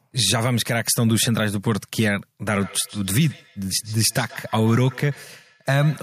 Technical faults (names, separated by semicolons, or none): feedback echo between two devices